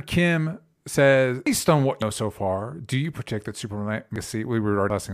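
Compressed frames skipped at 1.47, 2.02, 4.16 and 4.90 s in this speech clip: at each point whole frames of the encoded stream go unplayed, so the audio jumps forward, by about 0.7 s, 0.2 s, half a second and 0.3 s respectively. The stream uses 92.9 ms frames.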